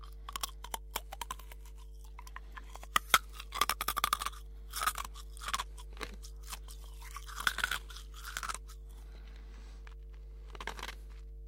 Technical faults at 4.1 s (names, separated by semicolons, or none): mains hum